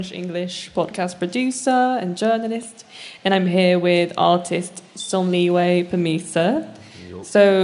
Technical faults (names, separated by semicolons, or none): none